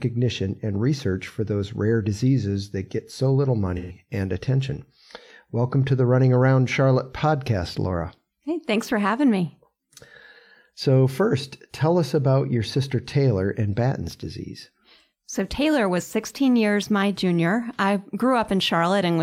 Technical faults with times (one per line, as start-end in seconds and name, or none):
3.76-3.98 AAC frame loss with concealment